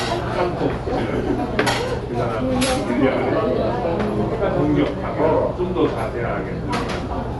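Throughout, the sound is dull, cut off sharply above 11.6 kHz, with a rough, fluttering haze around tones. Likely Dolby Digital compression at a bitrate near 64 kbps, with starved frequency lines refilled by dither noise. Spectrograms show a flat ceiling and speckled grain.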